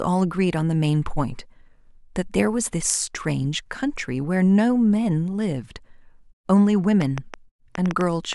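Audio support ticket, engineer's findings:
Train of clicks, 7.02–8.34 s: about seven same-shaped pops, uneven spacing near 5.3/s, roughly 10 dB over the speech. Unlike random crackle, they're uniform. Likely external interference or a failing interface.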